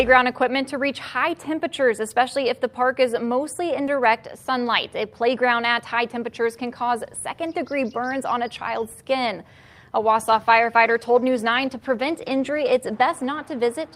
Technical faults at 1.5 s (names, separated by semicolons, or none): none